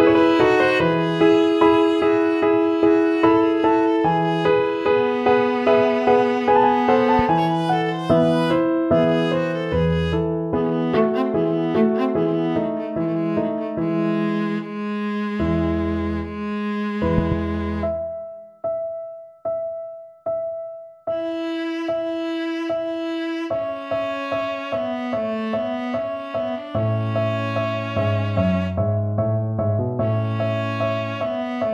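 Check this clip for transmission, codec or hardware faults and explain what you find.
One hardware fault stands out: a loud pop at 17.18 to 17.34 s, two sharp pulses well above the signal, likely from a plug, switch or static discharge, appearing as tall waveform spikes and full-band vertical spectrogram lines.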